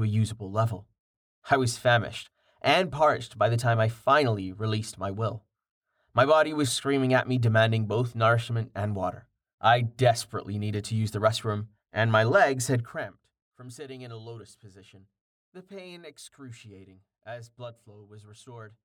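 At 12.73 s, just after "restroom and my legs", the level falls by roughly 20 dB over about half a second, finishing at 13.21 s before "from sitting in a". The change is applied in coarse, unsmoothed steps, around a hundred a second, and each jump leaves a tiny click, so the fade carries a buzzy zipper noise. On a waveform the envelope descends as a fine staircase. A spectrogram shows faint vertical broadband lines about 10 ms apart across that span.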